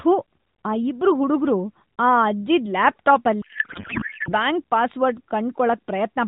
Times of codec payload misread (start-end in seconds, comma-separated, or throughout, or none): 3.42-4.33